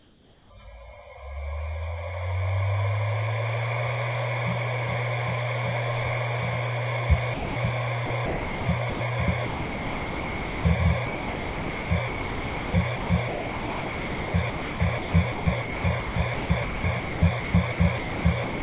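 A recording of sounds, heard through a call path that leaves nothing above 4 kHz (which points to a narrowband G.711 mu-law codec). It opens with comfort noise in place of the background: for the first 0.5 s the real ambience, which sits about 27 dB below the loud parts, is replaced by a smoother synthetic hiss about 4 dB quieter. This is likely discontinuous transmission, where the sender stops sending during a pause and the receiver generates noise to fill it. Sound dropped by the voice detector occurs twice. From 7.34 to 7.56 s (220 ms) and from 9.46 to 10.64 s (1.18 s), the sound vanishes and steady filler noise takes its place until the audio resumes. The sender's voice detector likely mistook these sounds for background and stopped sending them. Sound chopped by the voice detector appears in two stretches. Between 8.06 and 9.0 s, 540 ms of audio is punched out in more than one hole. 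From 11.06 s to the end of the clip, holes total about 4.93 s, so the sound keeps breaking off. The likely cause is the detector switching repeatedly between sending and not sending, so that sections of the sound were replaced by comfort noise.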